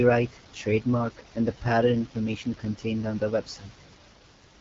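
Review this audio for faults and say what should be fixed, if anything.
The speech sounds rough and raspy for the whole clip, with no content above about 7.6 kHz. This is AMR wideband (HD Voice) codec damage at a very low rate, which fits the 8.85 kbit/s mode. The codec models speech below 6.4 kHz with a pulse-excited vocal tract filter and fills the band up to 7 kHz with shaped noise. At this rate the excitation is too coarse, so the speech turns harsh. To prevent it, carry the call at 12.65 kbit/s or higher.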